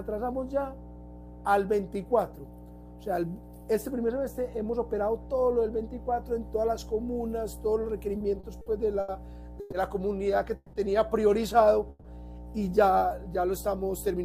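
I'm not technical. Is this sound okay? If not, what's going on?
No. There are three problems.

The first is mains hum, present for the whole clip. Electricity from the power line is leaking into the recording, probably through a wiring loop or a nearby transformer. You hear it as a steady low drone at 60 Hz, a deep buzz sitting under everything. It is fairly loud compared with the actual sound, so it is hard to ignore.

Between 8.17 and 9.10 s there are repeated stalls (stutter). The call's data kept arriving a little late, and the receiving end ran out of audio to play four separate times. Each time it stretched the last bit of sound to cover the wait. The longest wait was 80 ms, and the four together add up to about a fifth of a second. Nothing is lost, but the sound drags and hiccups through that stretch.

After that come three call audio freezes, at 9.60 to 9.74 s, 10.56 to 10.75 s and 11.89 to 12.06 s. 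The most likely cause is that the data was briefly held up on its way across the network. While waiting, the receiver carried the last sound on as a fading buzz or hiss for 120, 170 and 150 ms. During the second freeze it dropped to brief silence near the end. Each time the sound then picks up exactly where it stopped, so nothing is missing, but the clip ends up slightly delayed.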